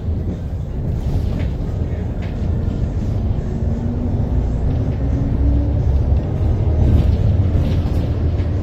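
No technical faults can be heard anywhere in this recording of sounds.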